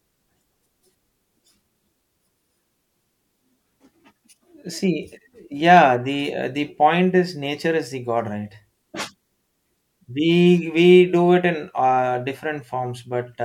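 Speech, with a single electrical switching spike at 5.77 s: a sharp snap lasting only a few milliseconds and peaking around -20 dBFS, sitting on top of the talker rather than replacing any of the signal. It is most likely a nearby switch, relay or static discharge arcing and being picked up by the audio line. On a waveform it shows as a narrow vertical spike; a spectrogram shows a thin full-band vertical line.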